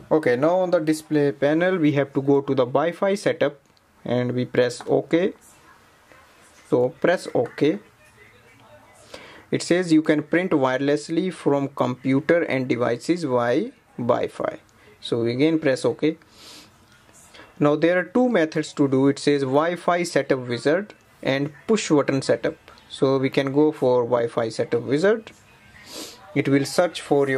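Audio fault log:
No technical faults are present in this recording.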